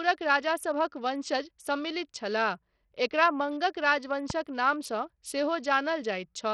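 Throughout the speech, the treble flickers and drops away under a gritty, aliased haze, likely heavy Bluetooth SBC compression starved of bits, which fits a bitrate near 64 kbps rather than broadband hiss. At 4.30 to 4.32 s a single loud pop, likely a voltage spike from a plug, switch or static, jumps roughly 10 dB above the speech, which carries on unbroken beneath it, unlike a dropout.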